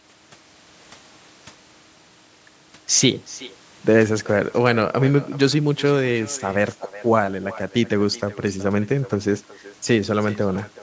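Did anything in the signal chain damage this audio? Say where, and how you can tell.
Yes. The damage happens in call processing at the far end, where there is an echo with no canceller. Throughout the clip, the speech is followed around 400 ms later by a quieter copy, about 19 dB down, that sounds thinner. The far end plays the call through a loudspeaker, its microphone picks that up, and no echo canceller removes it, so the sound returns over the network round trip. The top limit of 8 kHz is ordinary call bandwidth.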